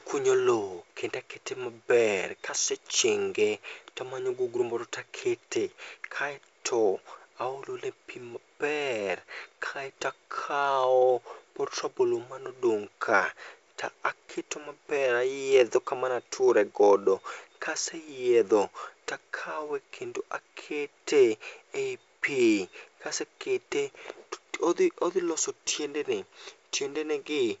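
Nothing stood out on listening to this speech, which comes through G.722 wideband telephone coding at 64 kbit/s with nothing above about 7.7 kHz.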